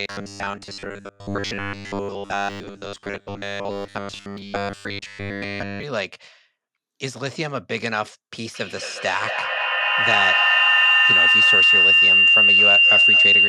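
From 0.01 to 5.83 s the speech has a rigid, metallic robotic sound. It is likely caused by repeated short buffers, with a 10 ms slice looping through most of this stretch to force a 100 Hz buzz. On a spectrogram this appears as evenly spaced horizontal harmonics 100 Hz apart.

From 8.54 s to the end, a feedback howl builds as a microphone-to-loudspeaker loop keeps gaining. It peaks about 11 dB above the speech, pulsing about every fifth of a second. On a spectrogram it shows as a bright narrow band near 3 kHz.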